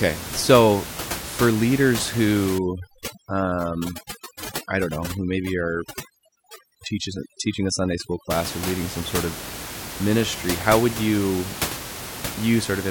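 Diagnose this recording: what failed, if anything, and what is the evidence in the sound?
Call processing applied overdone noise removal from 2.58 to 8.31 s. With room noise about 10 dB below the speech, the suppressor cut individual frequency bands near its noise estimate, leaving a background that drops and breaks up into twinkling specks.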